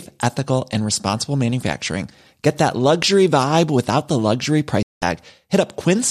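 Right after "vibe without the luxury", at 4.83 s, there's a digital broadcast dropout: the receiver mutes for about 0.2 s, until 5.02 s, which fits roughly eight lost frames, and that stretch is simply gone.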